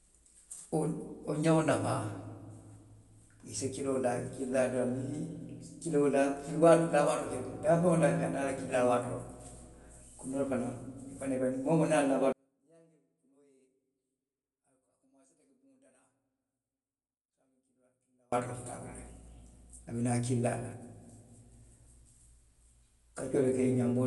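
Throughout the speech, the encoding was likely Dolby Digital compression at a low rate, one that fits about 64 kbps. The encoder has cut the band, leaving nothing above 11.4 kHz, and gave many lines no mantissa bits, so the decoder filled them with dither noise, and the sound is plainly damaged: dull, with a rough, fluttering noise around tones.

From 12.33 to 18.33 s, one channel was likely inverted in polarity before the mix to mono, so everything common to both channels cancels. The speech and background nearly vanish, dropping by about 39 dB, and only a faint residue of the mismatch remains until the level returns.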